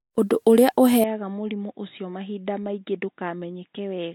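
From the first moment to the end, the speech carries generation loss, most likely from being decoded and re-encoded about three times with a lossy codec. The swirl and smear point to Vorbis at roughly 42 kbit/s. Each pass requantises on a shifted frame grid, so artefacts pile up: hollow, watery vowels and blurred consonant onsets. On a spectrogram, the upper band looks patchy with flickering holes and stops near 19.4 kHz. The waveform's transients look softened.

At 1.04 s the input switches to a poorer device, likely a headset call profile or a cheaper microphone, and stays there to the end with no gap at the change. The sound turns boxy and dull. The spectrogram shows everything above 3.8 kHz cut off abruptly. The waveform drops by about 10 dB at that instant. A faint new noise floor sits far below the speech, seen as a thin, even haze between phrases.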